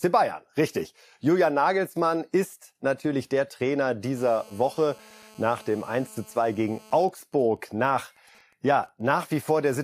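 From 4.17 to 7.05 s, GSM phone buzz sits under the speech. A nearby 2G phone in a call pulses 217 times a second, and the audio circuit rectifies it. The result is a hard, raspy buzz about 27 dB below the speech.

From 7.09 to 9.13 s, GSM signalling bursts follow. The phone's user has gone silent in the call, so only short burst groups arrive. They give faint, even ticks with a longer 217 Hz buzz twice a second, roughly 35 dB down.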